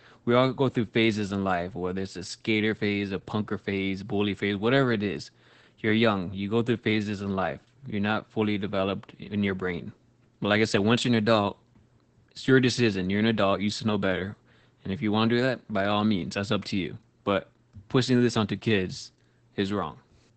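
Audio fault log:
throughout, Opus voice compression: the speech sounds muffled and hoarse, with a slightly robotic grain and no content above about 8.6 kHz, so sibilants lose their air. This is the wideband SILK mode of Opus: the encoder keeps only the band up to roughly 8 kHz and models the voice with linear prediction and a coarsely quantised excitation. The plainly audible damage fits a low rate near 12 kbps coded in 20 ms frames.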